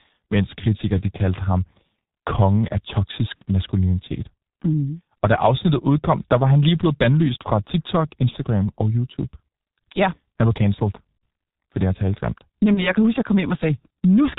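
The whole clip of speech carries heavy G.723.1 codec damage. The sound fits this low-rate telephony codec running near 6 kbit/s. Nothing above 4 kHz survives, so the voice is muffled. The codec models the voice in coarse 30 ms steps. That slow update makes the tone hoarse and smears consonants together. This dull, rough quality never lets up from start to finish.

VoIP packet loss concealed by the speech codec then breaks in four times. At 3.35 to 3.43 s the gap sounds like two missing 30 ms frames. Single-frame losses follow at 8.30 to 8.35 s, at 11.19 s, and at 12.74 to 12.87 s. Each time the decoder repeats its last pitch and filter at falling gain. The voice is briefly stretched into a buzzy tone or coloured noise that fades, then sounds weak or distorted for a moment after it returns.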